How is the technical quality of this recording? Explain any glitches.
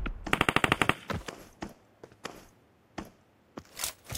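No glitches or faults heard.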